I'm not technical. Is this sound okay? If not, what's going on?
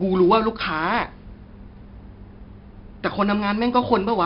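No. The speech sounds gritty and dull throughout, with nothing above 5.3 kHz. That is heavy 4-bit ADPCM compression, which stores sound as coarse steps.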